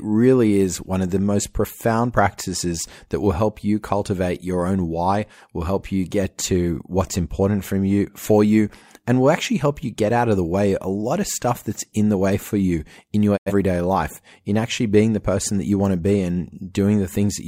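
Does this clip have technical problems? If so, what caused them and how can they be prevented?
Yes, there's a digital broadcast dropout from 13.36 to 13.52 s, right after "for you in your". The receiver lost good frames, fading to silence in about 20 ms before recovering at "life in actually being", which fits a couple of corrupted frames. Better reception and a stronger signal margin would prevent it.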